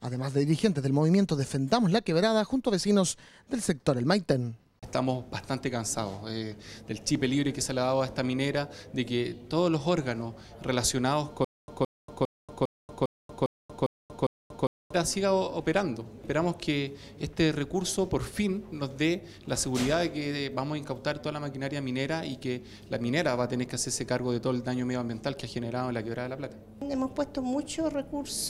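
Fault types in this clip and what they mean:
Stutter with silent gaps: the playback or stream likely stalled, and each time it retried it replayed its last fragment before running dry again. From about 11.4 to 14.9 s the same 168 ms burst of sound comes back eight times at a steady 403 ms period, each repeat followed by roughly 235 ms of dead digital silence. Whatever should have played during that stretch is missing, replaced by the looping fragment and gaps.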